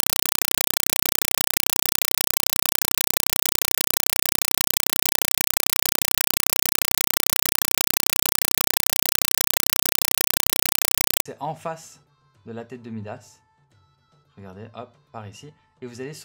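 From 0.0 to 11.3 s the sound is replaced by loud, chattering static: a compressed stream played as audio. An AC-3 bitstream was passed through as plain samples, so each 4 ms noise burst, repeating 31.25 times a second, is a raw frame. That steady rhythm separates it from random hiss or crackle.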